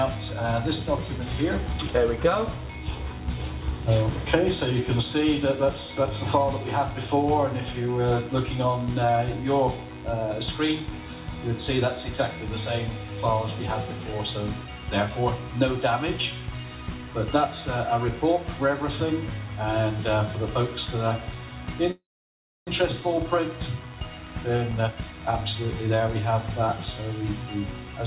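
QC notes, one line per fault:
21.91–22.68 s, call audio freeze: the sound stops and a brief fading buzz trails into about 0.64 s of silence, then resumes exactly where it left off, with nothing lost. The likely cause is delayed packets draining the jitter buffer, inserting a gap of about 0.76 s.
23.01 s, skip ahead: playback lurches forward with almost no gap as roughly 0.4 s of audio vanishes and the two sides are butted together. Audio was dropped while later packets were already queued, which takes back part of the delay the freeze built up.
24.25–26.21 s, jitter buffer speed-up: the audio runs about 16% fast at unchanged pitch and sounds hurried. The buffer held more than its target after the backlog arrived, so the receiver repeatedly cut short pitch-period slices, around 0.3 s in total, across the 4 kHz-limited call band.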